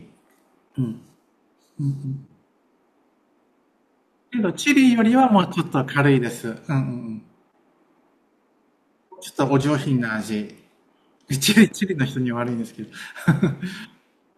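Nothing stood out on listening to this speech recording.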